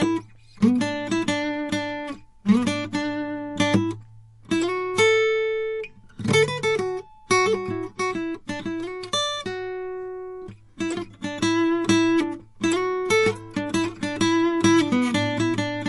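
Throughout the music, nothing is present above 11.3 kHz, and plainly audible watery, swirling artefacts come and go as weak frequency content drops in and out. This is likely MP3 compression, with the hard treble cutoff pointing to a low bitrate near 48 kbps.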